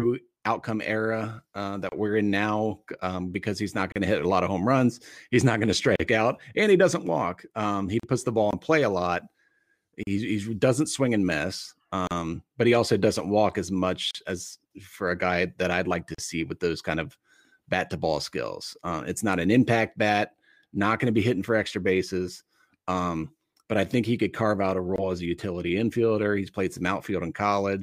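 Speech encoded in two-second pieces and joined without trimming encoder delay and padding leaves a gap at each join of encoded pieces: short silences of 31 to 38 ms at 1.89, 3.92, 5.96, 8.00, 10.03, 12.07, 14.11 and 16.15 s.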